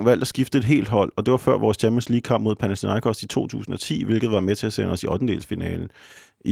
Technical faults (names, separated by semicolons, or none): lost packet rebuilt from error correction